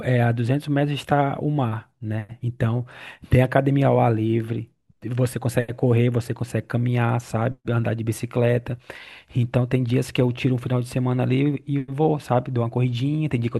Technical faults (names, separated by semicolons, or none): none